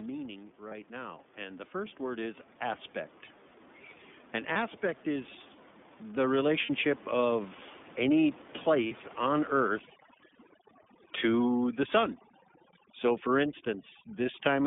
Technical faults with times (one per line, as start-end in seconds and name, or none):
0.00-14.67 iLBC codec
0.57-2.91 automatic gain rising
0.68-0.73 lost iLBC frames
4.52-4.56 lost iLBC frames
6.65-6.70 lost iLBC frames
8.87-8.92 lost iLBC frames